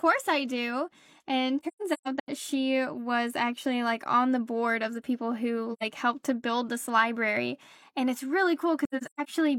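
AAC frame loss with muting occurs at 1.60–2.29 s, 5.73–5.83 s and 8.85–9.29 s. The decoder zeroed the missing frames' spectrum, and the overlapping windows fade each gap out and back in, leaving soft-edged holes. The first scatters about 0.38 s of dropouts before "she was actually like." The second loses two frames, about 85 ms, between "of the people who" and "helped to build this." The last follows "it's really," and like the first it has runs of up to about 150 ms.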